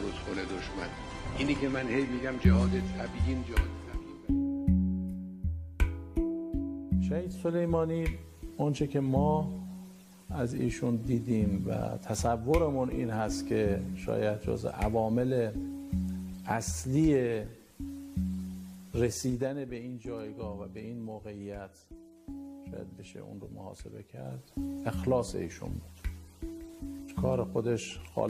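From 19.04 s to 20.06 s, the level falls by around 10 dB in discrete 2 dB steps instead of a continuous ramp, producing zipper noise. Each step changes the gain abruptly and leaves a small click, so a ticking pattern of roughly five per second rides on the sound while the level moves.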